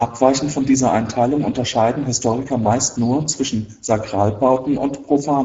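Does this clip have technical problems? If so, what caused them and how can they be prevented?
Yes. Throughout the clip the speech sounds hoarse and grainy, with nothing above 7.6 kHz. This is Speex codec damage: at a rate that fits about 10 kbps, the CELP coder has too few bits for the excitation. Encoding at a higher Speex quality setting, or with a wider-band modern codec, prevents it.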